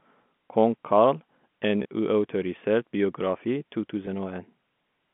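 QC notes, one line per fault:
1.83 to 1.85 s and 4.06 s: packet loss with pitch repetition. About 20 ms of speech goes missing first, then 10 ms. That points to two lost packets, then one. The receiver bridges each gap by looping the last pitch period. Both gaps are short, so the loop never fades into silence. Each one sounds like a brief held, buzzy tone. The narrow telephone band carries these repeats like the rest of the sound.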